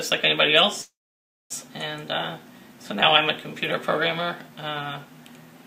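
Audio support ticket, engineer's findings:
Call audio freeze, 0.81–1.52 s: short fading buzz, then 0.58 s silence; resumes where it stopped, nothing lost, 0.69 s late. Likely delayed packets emptied jitter buffer.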